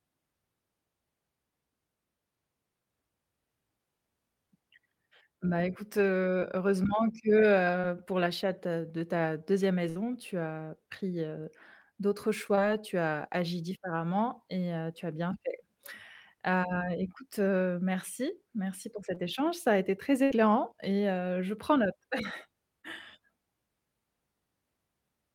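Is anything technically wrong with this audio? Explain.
Yes. This speech recording has two kinds of network dropout.

Short concealed packet loss shows up as brief smears or wobbles at 6.39–6.43, 7.81–7.85 (just before "heu pour l'achat de"), 12.55–12.59 (between "as pris heu d'autres" and "tu as agi différemment"), 19.15–19.18 (between "heu merci merci pour" and "échange ça a été") and 22.82–22.85 s. Each time about 20 ms of audio arrived too late to play. The decoder covered each hole by extending the preceding sound for roughly 12 to 22 ms, then faded back into the real signal.

A burst of packet loss is heard as a held buzz or fading hiss at 9.89–9.97 and 20.24–20.32 s. The audio then resumes a moment later, with some content missing. Here about 60 ms of consecutive audio was lost. The receiver continued the last sound for close to 60 ms and lowered it as the gap went on, so the sound skips past the missing stretch.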